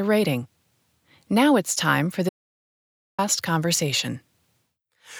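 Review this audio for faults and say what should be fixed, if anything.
Audio dropout to silence, 2.29 to 3.18 s, just after "it's time for": about 0.89 s of silence, likely from lost input while recording continued. Secure connections and monitor input levels so recording stops or alerts when the signal drops.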